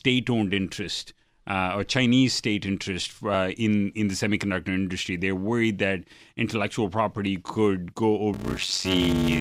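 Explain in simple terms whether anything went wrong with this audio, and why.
Near the end, from 8.33 s to 9.40 s, the speech picks up a steady buzz at about 94 Hz and slows to roughly 0.63 of its normal pace. This is a block size mismatch (padded). One stage hands over shorter chunks of audio than the next expects, which fits a 512-sample block being read, and the missing part of each block is filled with silence. Those tiny gaps repeat to make the buzz and stretch the timing. Unlike playback at the wrong speed, the voice's overall tone stays about normal.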